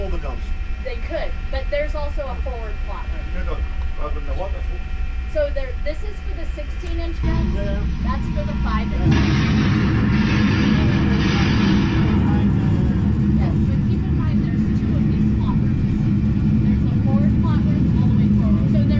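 No technical faults are audible anywhere in this audio.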